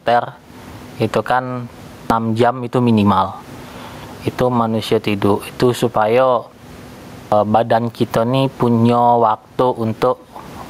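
Gain pumping runs through the whole clip. The level swings by roughly 20 dB. Loud and soft passages sit unnaturally close together, and the speech sounds squashed. The likely cause is a microphone gain set far too high, with a fast limiter or compressor clamping down on every peak. The room noise sits about 38 dB below the speech.

At 2.01 s there is a clipped start after a pause. The pause before it lasts 0.35 s. The first 91 ms of the next sound is missing, so it starts abruptly out of silence. The same thing happens at 7.22 s, after a 0.77 s pause, with about 98 ms lost. In both cases the output device seems to drop into a sleep state during the silence and takes time to wake and lock again.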